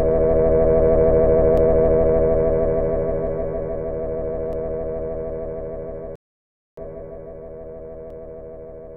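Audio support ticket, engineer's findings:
Rebuffering stall, 6.16 to 6.77 s. Everyday sound cuts to silence for about 0.62 s, then resumes exactly where it stopped; no audio skipped, 619 ms added to playback time. Probable component: streaming player buffer. Mechanism: playback consumed all downloaded audio before the next data arrived, so the player halted output and waited, restarting from the same position once enough was buffered. Check network throughput and buffer threshold settings around that point.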